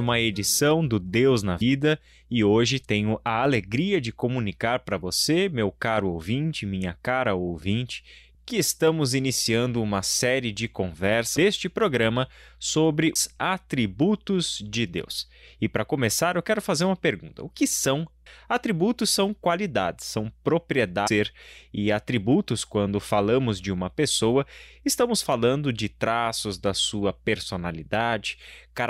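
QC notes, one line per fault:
1.60, 11.36, 13.14, 18.25 and 21.06 s: damaged data in a compressed stream. Corrupt bytes make the decoder misread frames and resync, leaving brief glitches such as chirps, squawks, clicks or short holes.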